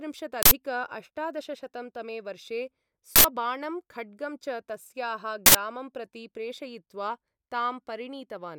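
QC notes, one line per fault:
0.43–0.51 s, 3.16–3.24 s and 5.46–5.55 s: uninitialised buffer. Three loud bursts of harsh digital noise, each about 85 ms long, which fits a 4096-sample block. Each time, a block was played before any audio was written to it, so leftover memory contents came out as samples.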